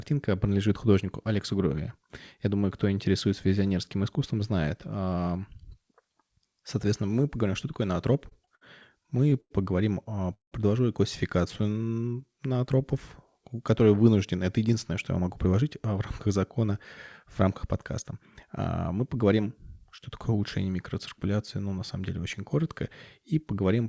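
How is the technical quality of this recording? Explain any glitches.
The speech has timing glitches in its middle section, all from a call path whose band stops at 8 kHz, which fits a G.722 wideband codec.

Repeated stalls (stutter) occur from 8.14 to 8.63 s, just after "мы поговорим что такое", then from 9.03 to 9.52 s and from 10.04 to 10.54 s. The speech hitches and drags, with brief held or smeared sounds: 5, 6 and 4 stalls, the longest about 58, 100 and 183 ms, covering roughly a quarter, a third and over two fifths of each stretch. Packets arrived late, the jitter buffer ran dry, and the receiver stretched the last sound until data returned. Nothing is actually lost.

A jitter buffer slow-down runs from 11.61 to 12.83 s. The speech there plays at about 88% speed with unchanged pitch, so syllables sound drawn out. Running low, the buffer rebuilt its reserve by repeating single pitch periods and pause fragments, adding about 155 ms in all.

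Jitter buffer speed-up appears from 14.58 to 16.69 s, right after "которые вынужден это", and from 17.23 to 20.01 s, ending just before "такое улучшение микроциркуляции ну". The speech sounds slightly hurried at the same pitch, at about 106% and 105% speed. The buffer held more audio than its target, so the receiver trimmed short pitch-period pieces repeatedly, around 150 ms in each stretch, to bring the delay back down.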